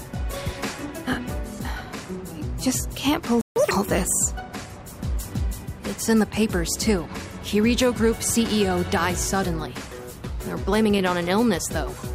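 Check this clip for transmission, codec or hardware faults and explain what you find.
Two related playback faults sit back to back near the 3.4-second mark.

Playback stall, 3.41 to 3.56 s: the player was likely starved of data or blocked, so output went silent for about 148 ms, cutting the sound off mid-flow.

Catch-up at higher speed, 3.56 to 3.71 s: the player resampled its backlog at double speed, so the sound briefly rushes and jumps up by about ten semitones before returning to normal.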